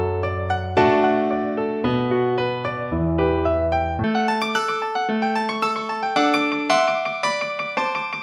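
From 4.04 s to the end at 8.22 s, the sound runs at twice its speed and a full octave (12 semitones) higher, the signature of a wrong sample rate, consistent with 24 kHz material played at 48 kHz. Unlike pitch shifting or time stretching, speed and pitch rise together by exactly the same ratio.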